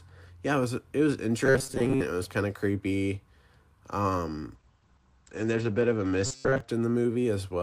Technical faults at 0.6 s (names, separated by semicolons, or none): none